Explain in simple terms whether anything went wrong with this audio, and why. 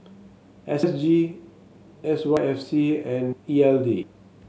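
The speech jumps ahead at 0.83, 2.37, 3.33 and 4.03 s. This is likely a dropped buffer (overrun): audio was overwritten before the recorder could save it.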